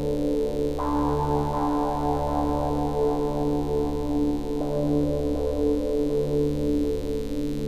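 A steady, raspy buzz sits under the sounds from start to finish, around 25 dB below them: mains buzz, from switching spikes twice in every 50 Hz mains cycle and their harmonics leaking in.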